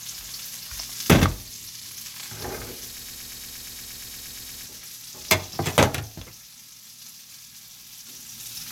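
From 2.99 s to 4.66 s, the everyday sound stops moving forward and turns into a broken-record loop. A fragment about 117 ms long plays, then plays again, back to back, 14 times in a row. Each repeat is identical, so the result is a rapid, mechanical stutter. The cause is likely a stalled player or stream that kept resending the last piece it held. Whatever should have played during those 1.7 seconds is missing.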